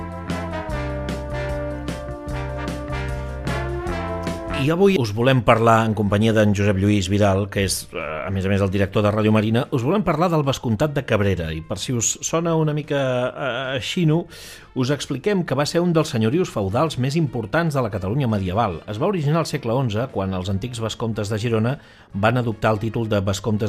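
From about 4.38 s to the end, the sound picks up channel delay (comb filtering). One channel runs roughly a single sample late, about 0.02 ms, and the mono sum cancels near 20 kHz. The result is a top-end dulling rather than obvious hollowness.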